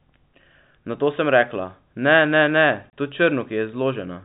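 A speech clip with a single abrupt dropout: at 2.90 s the sound cuts to dead silence for 30 ms, returning at 2.93 s, and both edges of the gap are hard because the waveform is chopped rather than faded. This is packet loss filled with silence. Several consecutive packets never arrived and the receiver played silence in their place, and the gap length fits three 10 ms packets. The G.711 telephone coding keeps everything below 4 kHz, giving the narrowband telephone tone.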